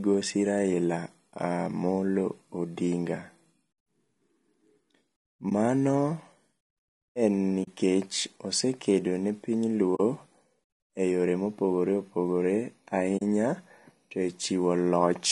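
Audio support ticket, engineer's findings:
Rough, grainy speech throughout, with noise filling the gaps between pitch harmonics and the damage plainly audible. Likely low-delay AAC compression (AAC-ELD): its short frames resolve harmonics poorly and spend bits fast, which fits about 32 kbps.

Soft-edged dropouts at 5.49–5.52 s (20 ms), 7.63–7.68 s, 9.95–10.00 s and 13.17–13.22 s (40 ms each), fading out and back in. AAC frame loss with muting: the decoder zeroes each lost frame's spectrum, and overlapping windows taper the edges. Lengths fit one and two lost frames.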